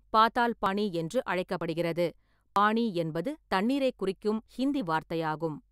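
Audio missing between chunks at 0.66, 1.61, 2.56 (just before "பானி என்பது தண்ணீரைக்") and 4.46 s: about 50 ms skips, likely lost as one-second processing chunks were handed over and spliced without silence.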